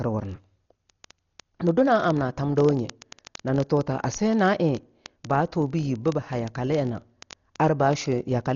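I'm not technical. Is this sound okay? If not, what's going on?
No. Throughout, the speech sounds dull and muffled, as if heard through a blanket: nothing above about 6.9 kHz survives, and there's a rough, fluttering fuzz around the voice. That points to heavy Dolby Digital compression, likely from squeezing the file very small. Unlike simple muffling, it adds that grainy shimmer.

From about 0.11 s to the end, a rapid, steady stream of sharp little clicks runs under everything, roughly fifty per second and uneven in strength. These are word clock ticks: two connected devices keeping slightly different time, each click a single sample slipped. Their regular pace distinguishes them from random crackle.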